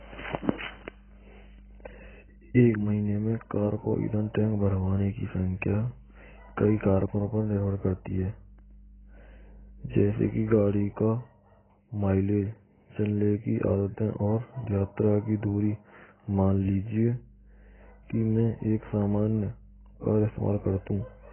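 From start to finish the speech sounds like AAC compression, and heavily at that. Nothing comes through above about 3.1 kHz, so the top end is simply gone and everything sounds dull and boxed-in. Sibilants turn fizzy and smeared, and sustained vowels pick up a watery warble. That's the likely cause: an AAC-LC encoder starved of bits drops its cut-off and coarsely quantises what's left, which points to a bitrate somewhere around 12 kbps.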